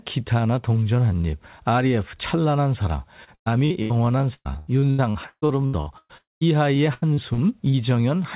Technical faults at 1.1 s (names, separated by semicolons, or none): none